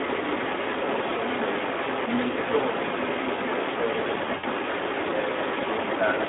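Across the whole clip the speech carries Speex codec damage: a hoarse, noisy grain, and the band is held between about 250 Hz and 3.6 kHz, so it sounds thin and boxy. The degree of roughness fits a low bitrate around 11 kbps.

From 0.0 s to the end, a second copy of the speech trails the first by about 217 ms, at roughly the same loudness. This is likely an echo leak: a far-end loudspeaker's output reached its microphone, and the echo canceller failed to remove it.

At 4.37 to 4.46 s there is VoIP packet loss concealed by the speech codec. About 60 ms of audio is missing, and the decoder fills it by stretching the last sound into a fading tone or noise. The voice stays weakened briefly after the gap as the decoder recovers.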